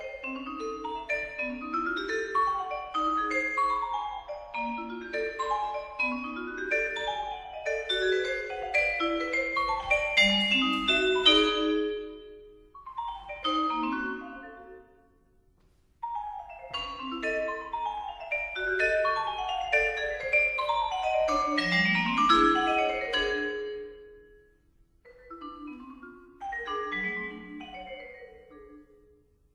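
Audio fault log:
No faults found anywhere in the clip; nothing to log.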